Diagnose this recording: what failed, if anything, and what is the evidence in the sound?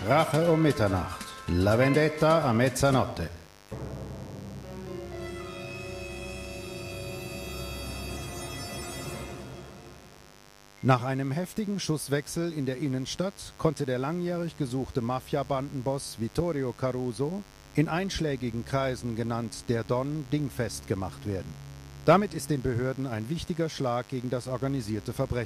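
A steady, raspy mains buzz runs under the sound from start to finish, sitting roughly 25 dB below the programme. That points to the analogue wiring: a dimmer, rectifier or unshielded lead is injecting switching spikes twice per 50 Hz cycle, spraying harmonics up into the kilohertz range.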